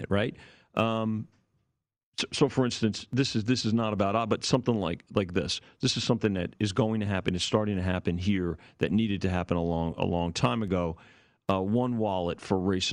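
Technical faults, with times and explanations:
Nothing technical stands out here; the speech comes through without any dropouts, glitches or other problems worth flagging.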